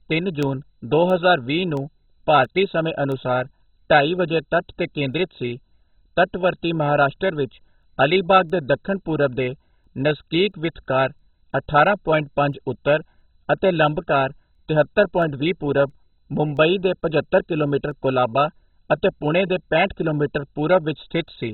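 MP2 compression runs through the whole speech clip: the audio is dull, with nothing above 4.1 kHz, and carries a heavy gurgling, granular texture. This is likely MPEG Layer II coding starved of bits, which fits a rate around 16 kbps. The coder divides the signal into 32 sub-bands and must share very few bits among them, so the upper bands are shut off entirely and the surviving ones are quantised so coarsely that they bubble and flicker.

Word clock ticks run from 0.43 s to 21.28 s: about thirty short, sharp clicks at a steady interval of roughly 0.7 s, some louder than others. They point to a digital link whose receiver runs on its own clock instead of locking to the sender's, with the two clocks drifting apart by a few tens of parts per million. Each time the clocks slip past each other, a single sample is dropped or doubled, producing one tick.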